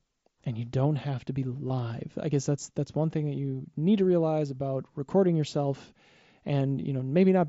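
Concealed Bluetooth headset packet loss at 1.68–1.70 s: a 22.5 ms gap, fitting three lost frames, is filled with copied recent waveform, heard as a brief buzzy blip.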